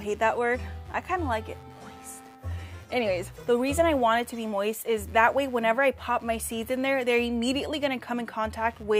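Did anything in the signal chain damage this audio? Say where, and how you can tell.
Yes: a faint buzzing chirp, pulsing around 100 times a second and roughly 35 dB below the signal, runs throughout. This is computer activity noise: load changes of the processor, graphics card or mouse disturbing the analogue wiring's shared ground.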